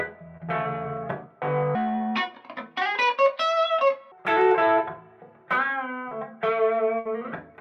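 At 0.37 to 0.41 s there is a short concealed packet loss. A fraction of the stream arrived too late, and the decoder bridged the hole by extending the last sound for a little under 20 ms before crossfading back into real audio. The result is a brief smear or wobble rather than a silence. Because the fill is so short and returns at full level, it is distinct from a burst, which fades.

From 1.75 to 4.12 s the sound plays at the wrong speed, about 1.48 times too fast. Pitch rises by roughly seven semitones, and everything is hurried in step with it. That the tempo and pitch move together, starting and ending at fixed points, separates this from pitch shifting or time-stretching, which change one without the other. The likely cause is a section resampled or played against the wrong clock.

A second short concealed packet loss falls at 6.10 to 6.13 s. It is a shorter patch, about 12 ms of continued sound, heard as a tiny wobble before the real signal resumes.

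At 6.99 to 7.07 s a burst of packet loss removes about 60 ms in a row. The receiver holds the last sound and turns it down as the gap lengthens, so it becomes a decaying buzz or hiss before playback jumps ahead with that stretch missing. The fading hold and the skipped material mark it as more than the brief smears of a short concealed loss.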